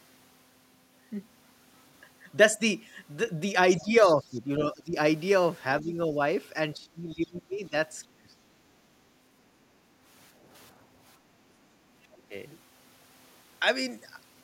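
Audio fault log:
3.70–4.14 s, other side's voice leaking through: a faint second voice sits beneath the talker for just under half a second, roughly 15 dB lower. This is likely far-end audio from the talker's loudspeaker that reached the microphone and was not fully removed by the echo canceller. The residual is heard alongside the talker rather than replacing it, so it reads as a quiet overlapping voice.
3.80–4.96 s, 5.82–6.18 s, 6.75–7.73 s, 8.08–8.35 s and 12.08–12.34 s, speech suppressed in double talk: the talker's level dips repeatedly during these spans. The drops run from about 10 dB at 5.82 s to around 20 to 25 dB at the other times. The longest stretch lasts about a second, around 6.75 s. The likely cause is the echo canceller failing to separate near and far speech while both sides talked, so it attenuated everything.
10.33–11.38 s, background gated by the echo canceller: the room sound drops by about 8 dB for roughly half a second in total within this span, then recovers. 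While the loudspeaker was active, the canceller clamped the microphone path hard, pulling the ambient floor down with it. When it released, the background returned, which makes the level step audible as a brief gap in the room tone.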